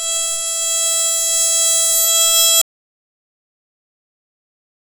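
The whole music clip has a grainy, gritty edge that shifts with the sound, with quieter passages roughening most. That's low bit depth without dither, likely the audio rounded down to around 8 bits, leaving an error floor roughly 35 dB below the music that follows its every move.

At 2.62 s the music cuts out into dead digital silence, with no room tone, and it stays gone to the end. That's an audio dropout to silence, likely a lost input while the recorder kept writing silence.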